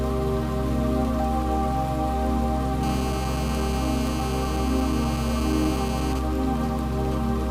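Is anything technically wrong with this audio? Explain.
Yes, there are two faults. From 2.83 to 6.14 s, a nearby 2G phone in a call, its radio bursts rectified by the audio circuit, produces GSM phone buzz: a hard, raspy 217 Hz buzz with many harmonics, about 13 dB below the audio.

From 6.15 to 7.42 s, a nearby 2G phone in a call, with its user silent, sends sparse bursts, causing GSM signalling bursts: even ticks with a longer buzz twice a second, roughly 20 dB down.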